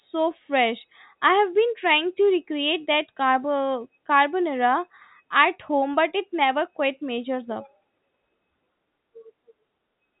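No technical faults can be heard anywhere in the clip. The speech comes through G.711 telephone coding working as intended, so nothing above about 3.8 kHz reaches the ear, and any coding noise riding under the level is faint at most.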